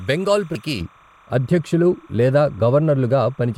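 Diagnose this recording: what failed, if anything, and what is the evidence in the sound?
Timecode bleed is there the whole way through, a chirpy warble flipping between roughly 1 and 2 kHz, sitting maybe 25 dB under the speech. It clocks at 29.97 frames per second, so it's LTC from a neighbouring cable or track leaking in at the analogue wiring.

At 0.55 s there's a single quick glitch, damaged data in a compressed stream. That's a codec or storage problem. Some bytes in the file got corrupted, the decoder choked on that frame, lost sync and had to hunt for the next header.

From 0.81 s to the end, the top end drops off smoothly, about 11 dB down at 10 kHz relative to 1 kHz, so everything goes muffled. That's de-emphasis applied wrongly, a treble-cut stage switched on in processing or playback either for audio that was never pre-emphasised or a second time on audio already de-emphasised.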